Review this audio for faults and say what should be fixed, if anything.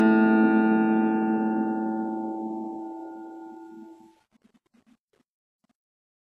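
Low-bitrate audio saved at a high bitrate, throughout the music: nothing sounds above 12.3 kHz, and the artefacts of a very low-bitrate first encode remain. The likely cause is a pass at roughly 16 kbit/s later re-saved as high-bitrate MP3, which adds file size but cannot restore what was removed. To prevent it, export from the original lossless master rather than transcoding an already compressed file.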